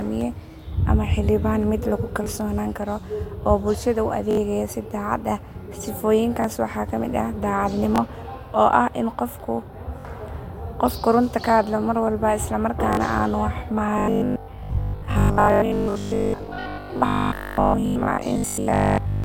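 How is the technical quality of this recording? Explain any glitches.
The recording has two kinds of playback glitch: a series of stutters and, later, a stretch of robotic sound.

Repeated buffers occur at 2.24–2.26, 4.31–4.37, 6.42–6.44, 7.96–7.98, 10.01–10.05, 12.93–12.97 and 17.37–17.39 s. Audio arrived late, so the last 21 ms block replayed one to three times. Each sounds like a hard-edged stutter or click, which fits a 1024-sample buffer.

From 13.98 to 19.24 s, the speech turns into robotic sound from repeated short buffers. The likely cause is the software looping a tiny block most of the time while real audio is skipped. This forces a rigid 50 Hz metallic buzz that still loosely follows the speech.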